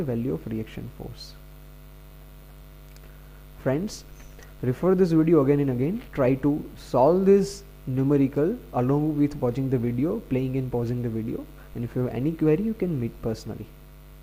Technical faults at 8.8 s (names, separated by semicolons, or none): none